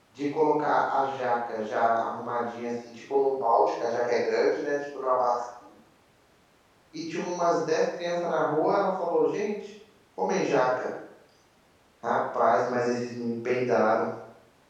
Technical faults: none

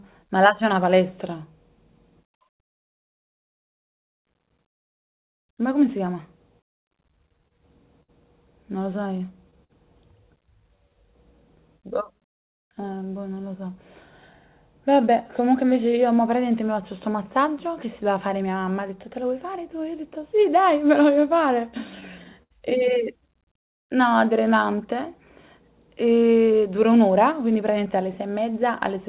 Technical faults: scattered short gaps; jitter buffer slow-down; jitter buffer speed-up; repeated stalls (stutter)

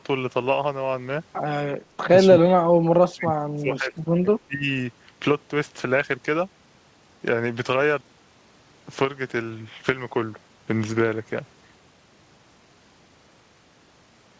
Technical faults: speech suppressed in double talk

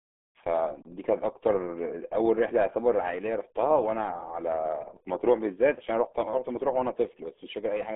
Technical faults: RealAudio 14.4 codec

